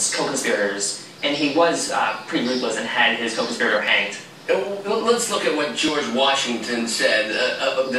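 Two devices in the chain are likely running on separate clocks that disagree by something on the order of 700 parts per million, so the buffer between them drifts until a small block of samples, on the order of 70, is dropped or repeated. These clock drift buffer slips come at a steady 2.0 s interval from 1.89 s to about 7.88 s, about four in all, each heard as a brief click or pop in the sound.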